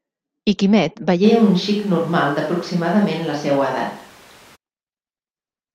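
Speech, with a clear change in pickup partway through. From 1.26 s to 4.54 s the voice turns roomy and hollow and loses its bass. The change in and the change back are both abrupt. The level stays roughly the same. Room noise comes up to about 30 dB below the speech. The likely cause is a switch to a distant microphone, with a far-off mic standing in for the close one over that stretch.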